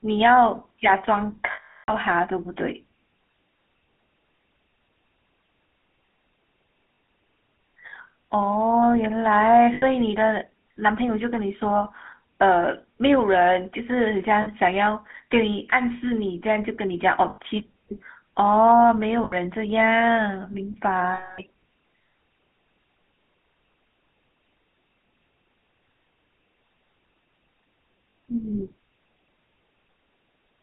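Speech through the GSM full-rate codec: band-limited to 200 Hz to 3.4 kHz, with plainly audible buzzy, gravelly roughness from pulse-excited vocal-tract coding at 13 kbps. Lost GSM frames at 1.52, 6.94, 9.74, 14.42, 17.3, 19.24, 21.14 and 28.1 s repeat the last good frame as a metallic ring lasting 40 to 360 ms.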